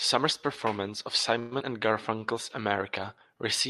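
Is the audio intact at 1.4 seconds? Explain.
No, there's a call audio freeze from 1.39 to 1.53 s, right after "performance of": the last sound hangs as a fading buzz for about 120 ms, likely a jitter buffer running dry, with nothing lost.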